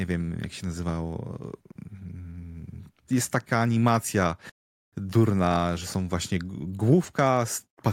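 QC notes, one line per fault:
No faults heard.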